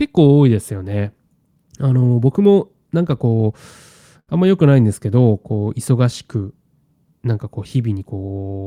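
A speech recording with a short stall from a late packet between 4.19 and 4.29 s. A packet missed its playout slot, the jitter buffer emptied, and the receiver stretched the last sound for about 77 ms before resuming where it left off, so nothing is lost but everything after runs 77 ms late. On a spectrogram the harmonics flatten into a held, frozen band; the waveform shows a repeating cycle with a faint buzz or dip.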